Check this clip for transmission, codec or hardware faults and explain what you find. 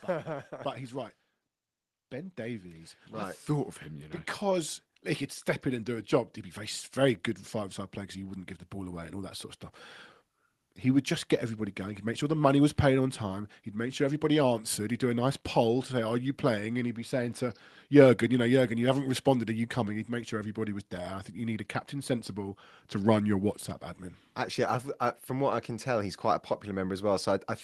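One real fault here. From 0.05 to 9.09 s there's automatic gain rising: the AGC heard a quiet input and slowly pushed gain up about 15 dB, so voice and background swell together until "all that sort of".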